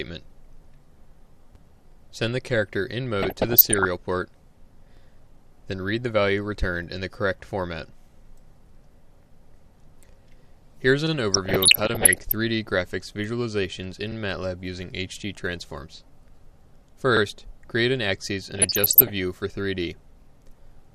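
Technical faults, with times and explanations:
1.92–1.97 s, 4.97–5.02 s, 14.12–14.17 s, 17.17–17.22 s: overlapping chunks. Each join brings a brief stutter or click as 50 ms of sound plays twice. The audio was processed in blocks of about 3 s, and each new block began 50 ms before the previous one finished, so the tail of one chunk repeats at the head of the next, giving a hiccup at the boundaries spaced about 3 s apart.
3.22–3.85 s, 11.33–12.32 s, 18.55–19.12 s: DAB burbling. Short blips of noise run over the sound in each stretch. Weak DAB reception let bit errors, somewhere under 1%, slip past error correction into the MP2 audio. Corrupted samples put blips of noise in single sub-bands, across what points to a few dozen frames per burst.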